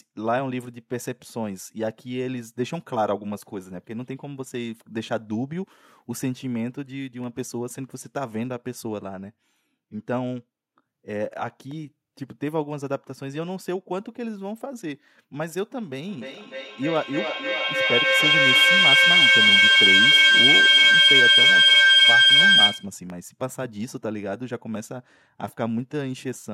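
From 16.09 to 22.98 s, feedback echo between two devices: a second device loops the microphone's feed back into it, so the speech repeats roughly every third of a second, building to about 12 dB above the original.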